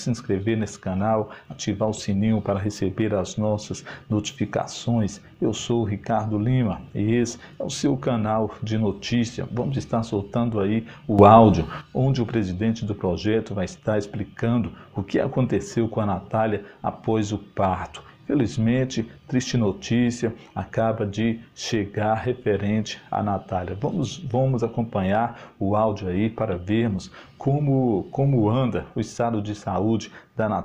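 At 11.19 s a sudden gain jump lifts the level by about 9 dB in a single step, likely a gain setting applied without a ramp, and it drops back at 11.81 s. The background noise rises and falls with the sound, and the change is instant rather than a gradual swell.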